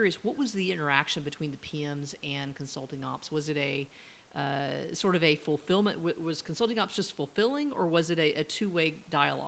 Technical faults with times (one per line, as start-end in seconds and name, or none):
none